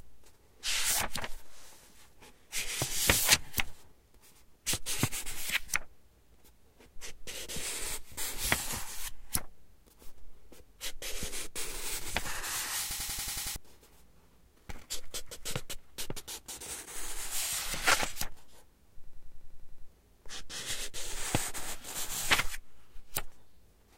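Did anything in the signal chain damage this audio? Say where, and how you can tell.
Yes: a system hang loop at 12.91–13.56 s and 19.04–19.88 s, in the driver or buffer stage. A 93 ms fragment repeats exactly, seven then nine times, stuttering at 10.8 Hz. That fits a 4096-sample ring buffer replaying while the host froze, losing roughly 0.7 s each time.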